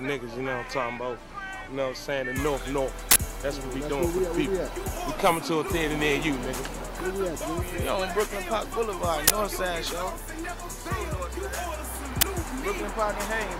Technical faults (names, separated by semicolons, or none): uninitialised buffer